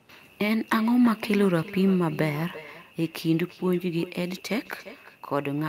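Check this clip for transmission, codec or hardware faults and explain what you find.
One transmission fault is present. Throughout the speech there is echo with no canceller: the far end's loudspeaker feeds its microphone, returning every phrase about a third of a second later, roughly 18 dB quieter and thinner.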